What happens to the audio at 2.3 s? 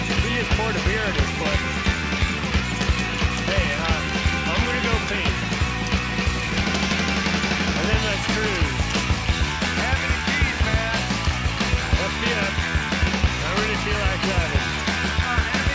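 Nothing goes wrong at 2.3 s: the audio plays through that moment without any dropout, click, glitch or other fault.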